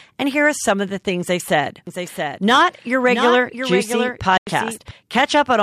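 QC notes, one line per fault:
1.87–4.91 s, doubled audio track: likely a second, slower capture path mixed in, so a dry copy about 5 dB quieter trails roughly 0.7 s behind, starting and stopping abruptly.
4.37–4.47 s, Bluetooth dropout: packets likely missed their deadline to the headphones, leaving a 93 ms silence, consistent with several dropped packets, before speech resumes as if it played on.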